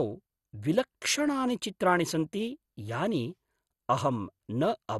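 A speech clip carrying audible MP2 compression damage from start to finish: the sound is dull, with a gurgling, granular roughness, and nothing survives above about 12.1 kHz. On a spectrogram this appears as a hard ceiling at that frequency, with upper sub-bands flickering on and off in blocky patches beneath it. The likely cause is MPEG Layer II encoding at a low rate, around 64 kbps, starving the upper bands of bits and quantising the remaining ones coarsely.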